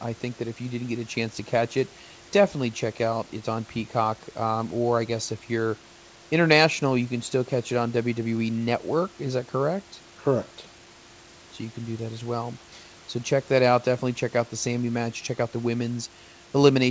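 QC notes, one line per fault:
No faults found; the speech is band-limited at 8 kHz, which fits a G.722 call path, and the room noise sits about 28 dB below it.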